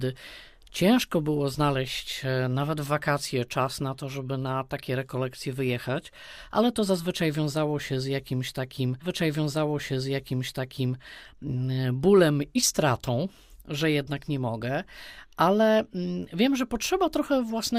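A stream segment repeated at 9.01 s: the two seconds of audio leading up to that point play again, running through to 11.01 s, so the clip is about 2 seconds longer than the material it carries. The player fetched or queued the same segment twice and played it back to back. At 9.01 s a small blip marks the jump back, and then a passage that has just finished sounds again in full before the programme moves on.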